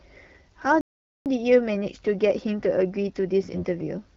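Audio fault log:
0.81–1.26 s, playback stall: the speech cuts to silence for about 450 ms, then resumes; likely the player ran short of data or its thread was blocked.
3.52–3.63 s, AMR bit errors: a brief hoarse, gargly scratch over about five frames, as flipped low-priority bits (around 7 percent) misplace pulses in the wideband decoder.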